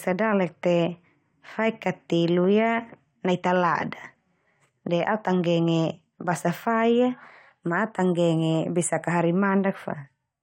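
Nothing stood out on listening to this speech recording; no technical problem could be heard at any point.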